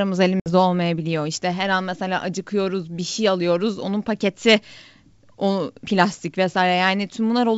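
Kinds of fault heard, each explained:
Packet loss on an ADPCM call: a few packets' worth, about 60 ms, drops to silence near 0.40 s. The resuming decoder's predictor and step size no longer match the sender's, so around 0.48 s the sound returns slightly distorted before settling. The waveform shows a flat, sheer-edged gap, and the spectrogram shows a blank vertical band.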